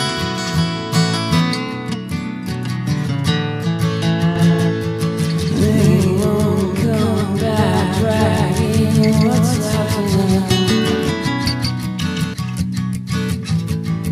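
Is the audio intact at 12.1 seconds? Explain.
No. A doubled audio track runs from 4.36 s to 12.34 s, so 12.1 s falls inside it. The likely cause is the same signal reaching the mix twice, once through a slower path that lags by roughly 200 ms. The late copy sits at about the same level as the original, full-band and dry, with no decay or room colour, so each sound is followed by a hard, flat repeat. The second copy cuts off abruptly at 12.34 s.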